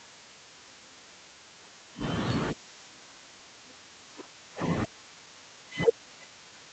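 From 5.19 s to the end at 6.73 s there's a jitter buffer speed-up. The receiver had too much audio queued, so it kept snipping out pitch-period slices, about a fifth of a second in total. The speech runs about 11% fast at unchanged pitch and sounds rushed.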